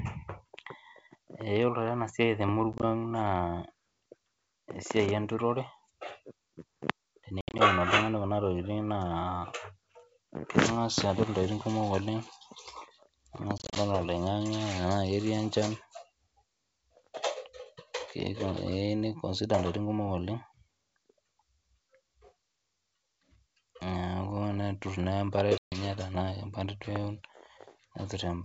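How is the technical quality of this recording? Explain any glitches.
The speech, carried as wideband G.722 audio, is marred by packet loss on an ADPCM call at 2.73–2.84, 7.41–7.60, 13.58–13.78 and 25.58–25.77 s. Dropped packets become silence, and the decoder's predictor drifts from the sender's. Each burst shows as abrupt blank slices in the waveform and spectrogram, followed by brief distortion as speech returns.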